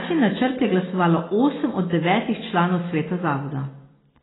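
From start to end, the speech loses everything above 3.9 kHz and sounds dull and smeared, with warbling vowels and fizzy sibilants. This heavy damage is likely AAC compression, fitting AAC-LC at about 16 kbps. A spectrogram shows a hard ceiling at 3.9 kHz.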